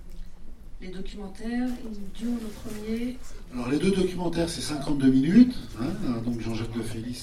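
No technical faults can be heard in this clip.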